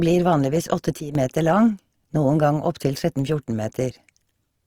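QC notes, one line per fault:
throughout: Opus compression. The speech comes across grainy and rough, with the tone of the sound turned noisy and gritty rather than swirly. The top end stays open, but the damage is plainly audible, pointing to Opus music mode at something like 24 kbps.
1.00–1.15 s: sudden gain jump. Right after "blir vanligvis" the level drops by about 10 dB in a single step, background noise included, then jumps back before "meter lang noen gang." This is likely a digital gain change applied without any ramp.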